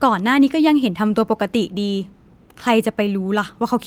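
No technical faults are audible.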